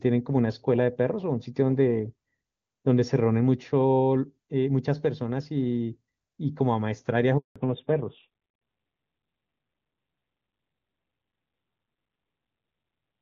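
At 7.38 s the speech cuts out abruptly. This is a handover gap. The call was passed from one network to another, and no speech frames came through during the switch. The sound fades within a few tens of milliseconds. Then there is dead silence for about 180 ms, until 7.56 s. Whatever was said in that window is gone and cannot be recovered.

From 7.56 s to the end, the call has a fallback to narrowband. Before the gap, the wideband HD Voice codec carried crisp, airy speech, consistent with AMR-WB near its top rate of 23.85 kbit/s. After it, nothing above 4 kHz remains. The sibilants lose their edge and the voice turns dull and muffled. A rough, buzzy grain appears. This fits a switch to AMR-NB at around 7.4 kbit/s.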